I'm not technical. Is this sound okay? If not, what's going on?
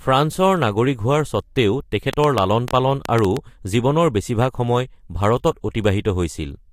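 No, not quite. From about 2.13 to 3.38 seconds there's a train of clicks in this speech: around ten sharp ticks, roughly six or seven a second, landing at an uneven pace rather than a steady beat. They sit on top of everything, so you'd hear them even in a gap between words. That pattern is likely interference from nearby equipment or a faulty connection or power supply, each glitch injecting its own pop.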